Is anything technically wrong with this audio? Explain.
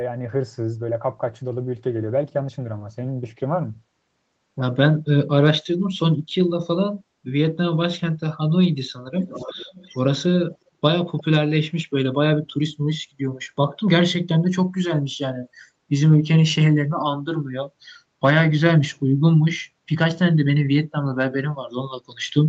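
Yes. An echo leak, likely from a loudspeaker-side echo canceller letting its microphone pickup through, sends a delayed copy of the speech back, trailing by about 0.36 s: a faint but clear stretch from 9.17 to 10.02 s, then barely audible scraps at 10.51 to 10.57 s and 11.18 to 11.24 s.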